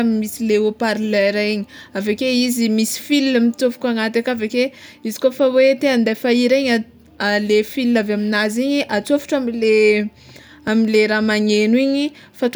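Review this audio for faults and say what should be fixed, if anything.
At 10.68 s the speech has a block of digital silence: the output stream was handed a run of zero samples, roughly 2.2 ms long, most plausibly because the audio buffer wasn't filled before it was due. The waveform drops straight to silence and jumps back with no fade, so both edges step sharply, and at this length the hole merges into a single tick rather than an audible gap. Give the audio thread a larger buffer or higher scheduling priority, and replace any invalid output with a short crossfade so an underrun can't reach the listener as a hard cut.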